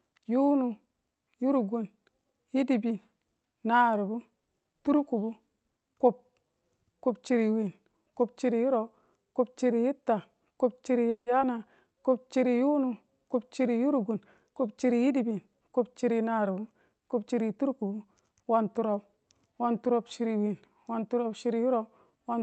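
At 11.09 s the speech stops and the last sound carries on as a short, fading buzz before about 90 ms of silence, 170 ms in all. This is a call audio freeze, most likely from packets held up in transit until the jitter buffer ran empty. Unlike a skip ahead, nothing is lost: when the audio resumes at 11.28 s it continues from exactly where it halted. The pause is inserted, and it pushes everything after it 170 ms later.

Almost immediately, at 11.40 s, there is a skip ahead. Playback jumps forward with only about 10 ms of bridging. Roughly 70 ms of speech is simply gone, and the two sides of the cut are butted together. Dropping this audio recovered part of the added delay, about 50 ms. The freeze inserts a gap with the speech intact, while this jump removes speech with hardly any gap.

From 11.58 to 12.29 s comes a jitter buffer slow-down. The receiver repeats single pitch periods, adding 53 ms over this stretch, so the speech runs at about 94% speed. 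The pitch stays the same but sounds are drawn out. This separates it from a tape-style slowdown, which would also lower the pitch.

Between 14.15 and 16.48 s the opposite correction appears as a jitter buffer speed-up. Short slices of one or a few pitch periods are cut out repeatedly, about 200 ms in total. The speech runs at roughly 107% and sounds hurried, yet the pitch does not rise. Because the pieces removed are tiny and spread out, there is no single audible jump as in a skip ahead. Throughout, the audio has the band-limited sound of an Opus call path, with content stopping at about 8 kHz.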